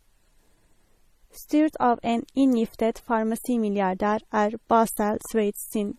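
From start to finish the speech has a smeary, watery coding texture and nothing above 15 kHz. It sounds like stacked damage, likely transcoding between lossy codecs: swirly artefacts that fit a low-rate MP3, re-squeezed by a low-rate HE-AAC pass.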